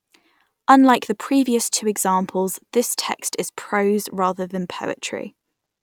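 Listening through the speech recording, nothing technical stood out.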